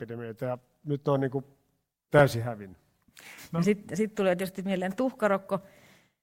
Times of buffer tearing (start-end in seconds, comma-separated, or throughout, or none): none